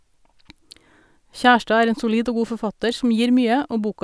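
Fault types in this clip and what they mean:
No technical faults can be heard in this speech recording.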